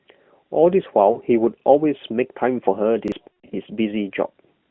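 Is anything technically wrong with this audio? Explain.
Yes. The speech goes through an AMR narrowband mobile codec, with a band of roughly 150 Hz to 3.4 kHz and light coding damage that fits the 12.2 kbps mode. Two kinds of fault break into it.

Lost AMR speech frames occur at 1.12 to 1.2 s, where two frames, 40 ms in all, fail, and at 3.28 to 3.55 s, where 200 ms is lost across 240 ms with a longest run of 160 ms. The decoder extends the last good pitch and vocal tract settings at falling gain. The first is a brief dip or warble. The second stretches and fades toward silence before the voice comes back weak or rough.

A repeated buffer occurs at 1.6 to 1.64 s and again at 3.08 to 3.12 s. Each time, new audio arrived late, so the player replayed the previous 40 ms buffer once. You hear a short stutter with a hard join at each repeat, and about that much fresh audio is missing.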